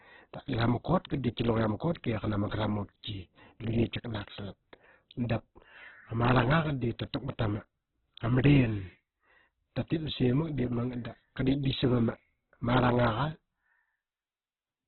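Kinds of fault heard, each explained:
Opus compression: The speech was likely pushed through Opus in its music (CELT) mode at a starved rate, the sort of damage that fits about 8 kbps. The encoder keeps each band's overall energy but, short of bits, fills in detail with folded or noisy content and limits itself to narrowband. Nothing survives above 4.2 kHz, so the voice sounds boxed-in, with dulled consonants, and is heavily rough, grainy and noisy rather than swirling.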